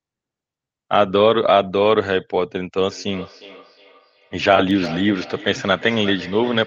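Feedback echo between two devices begins at 2.85 s and runs to the end of the clip. A second device in the room is replaying this call's audio, and this microphone picks that playback up and sends it back. The local echo canceller only removes its own loudspeaker's output, so the returning copy passes through. Each stretch of speech comes back roughly every 400 ms, thinner and ringing, with the loudest repeats about 17 dB below the direct speech.

CD scratch ticks fall between 4.56 s and 4.86 s: three short clicks, each a fraction of a millisecond long, spaced across that third of a second. A blemish on the disc wiped out more data than error correction could rebuild on successive turns, and the player patched the damaged samples, leaving brief ticks layered over the speech and the echo tail. The tail itself is band-limited to about 8 kHz by the call path.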